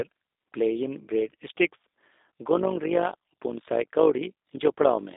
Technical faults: G.729 codec; overlap-add ripple

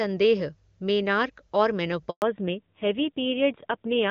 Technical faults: handover gap; fallback to narrowband

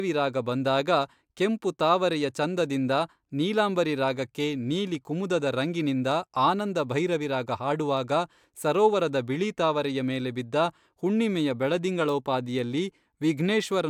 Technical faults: none

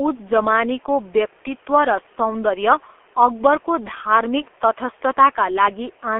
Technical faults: G.723.1 codec

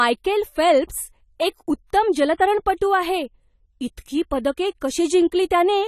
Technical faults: AAC compression

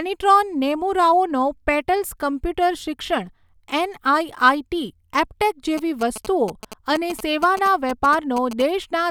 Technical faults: GSM signalling bursts

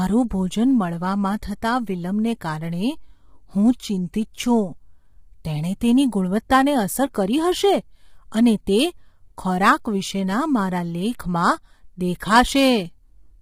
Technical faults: low-delay AAC compression

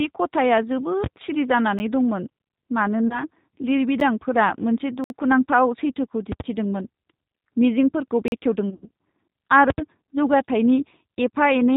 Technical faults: G.729 codec; invalid numbers at full scale; block of digital silence; VoIP packet loss concealed by the speech codec

